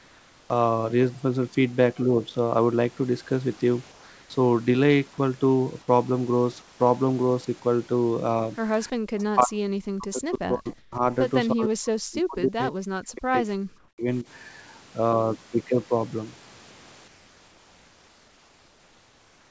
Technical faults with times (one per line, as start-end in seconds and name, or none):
0.00-0.50 comfort noise in place of the background
3.92-4.30 comfort noise in place of the background
6.62-6.80 comfort noise in place of the background
8.93-9.03 background gated by the echo canceller
9.31-11.03 speech suppressed in double talk
10.78-10.92 comfort noise in place of the background
11.52-14.26 speech suppressed in double talk
13.78-13.98 comfort noise in place of the background
17.08-19.51 comfort noise in place of the background